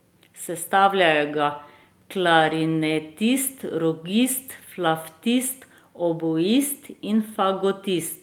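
At 1.33 to 1.39 s and again at 2.39 to 2.53 s, the speech turns briefly rougher and noisier without dropping out: a lost packet rebuilt from error correction. Packets went missing, and the decoder filled the holes with low-bitrate copies carried in the following packets. The first patch spans about 40 ms, fitting two 20 ms packets, and the second about 80 ms, fitting four.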